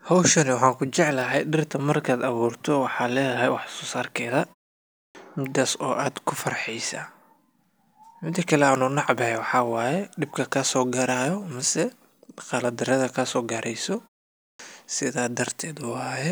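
Speech with a clipped start after a pause at 4.9 s, after "wax so sarkeda" and before "midas oo", and at 14.35 s, after "mise guldarada kaso gareyso". The output sleeps in the silence and wakes late, cutting about 0.25 s of each onset.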